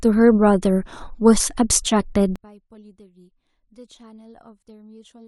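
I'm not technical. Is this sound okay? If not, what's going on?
No. From about 2.36 seconds to the end, the speech almost disappears and only a faint trace is left. This is likely one channel inverted: one side of the stereo signal has been flipped upside down. When the two sides are combined into one, as a phone speaker or mono playback does, the flipped copy cancels the normal one, so the centred voice nearly wipes itself out.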